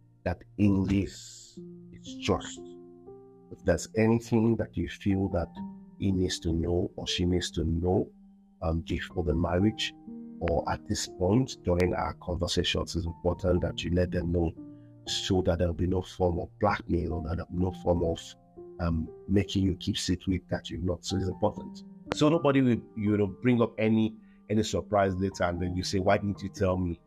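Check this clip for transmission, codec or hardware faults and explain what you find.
Three hardware-type faults stand out, all the same kind. Loud pops at 10.48–10.50, 11.80–11.82 and 22.12–22.14 s: a sudden voltage pulse, likely a plug, switch or static discharge, adds sharp thumps about 15–20 dB above the sound, which continues underneath.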